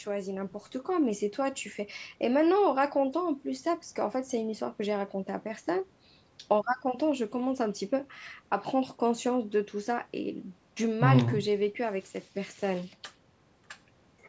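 No faults are audible in the speech; it carries the expected marks of call microphone processing, with the lowest bass rolled off and nothing above 8 kHz.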